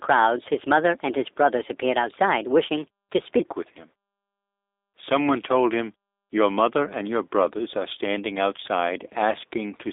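From the start to 3.39 s, the speech runs at the wrong speed. It plays 1.27 times too fast. Speed and pitch rise together, so the talker sounds hurried and high, lifted by about four semitones. Normal pace returns just before "with him". The likely cause is a section fitted to the wrong clock during editing or playback. Pitch and tempo shift as one, with no attempt to keep the pitch steady.

Across the whole clip, the speech carries plain G.729 codec damage. The sound is confined to a narrow telephone line, roughly 300 Hz to 3.7 kHz. Nothing passes above 3.8 kHz. The character points to G.729A at 8 kbit/s. This codec rebuilds speech from a vocal tract model, a pitch predictor and a few pulses per frame. The result is rough and slightly synthetic. Sibilants lose their edge.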